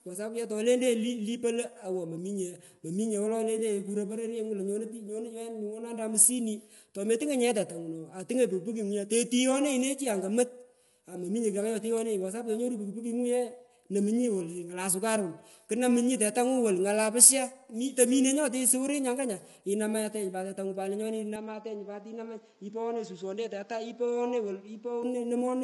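Throughout, low-delay AAC compression is the likely cause: short frames at what sounds like about 32 kbps smear harmonics, so the speech is plainly rough and grainy, with nothing above 11.6 kHz.

From 21.36 to 25.03 s, just after "inamatenyi pat tetangu lenyoni", the input likely switched to a poorer device without a gap: the band narrows to 7.3 kHz, the level falls somewhat, and faint new background noise appears.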